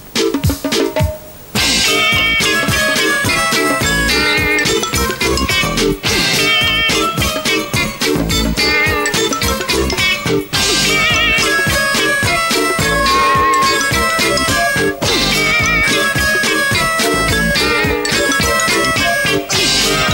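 At 12.73 s a loudspeaker feedback squeal kicks in and runs to about 14.01 s. It's a single tone at 1.1 kHz that swells over roughly 0.4 seconds, then sits a bit above the rest of the sound, about 5 dB louder. What's going on is the mic hearing its own speaker: at 1.1 kHz the loop gain tipped past one, so that frequency kept feeding itself.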